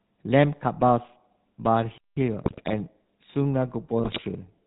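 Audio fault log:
throughout: GSM full-rate codec. The speech has the buzzy, gravelly roughness of the original GSM coder, which fits the 13 kbps full-rate scheme. The coder rebuilds the voice by driving a vocal-tract filter with a sparse, regularly spaced pulse train that keeps only every third excitation sample, so the fine texture of the voice is replaced by a coarse, rasping buzz. Nothing above 4 kHz gets through, which leaves the sound dull and narrow.
1.98–2.17 s: playback stall. The speech cuts out in mid-flow for about 190 ms of silence, then carries on. A gap like this, with the signal simply stopping rather than distorting, is most likely the player running short of data or having its output thread blocked. No sound is produced until it recovers and resumes feeding the output, so the break lands abruptly inside the speech.
2.44–2.75 s and 4.04–4.22 s: GSM bit errors. In both stretches the voice breaks up into squawks, pops and a gargling texture, which points to corrupted bits from a weak radio link reaching the speech decoder. 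When the damaged values control the filter shape, pitch or gain, each affected frame is rebuilt with a warped spectrum or a sudden jump in level. The first burst runs about 0.3 s, the second about 0.2 s.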